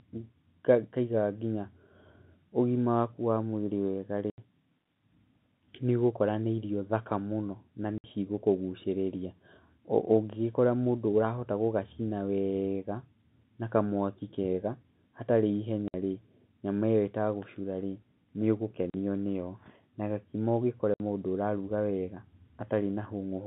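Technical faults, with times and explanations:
4.3, 7.98, 15.88, 18.9 and 20.94 s: packet loss filled with silence. The receiver played silence for missing packets, cutting 40 to 80 ms holes, multiples of 20 ms, with hard edges.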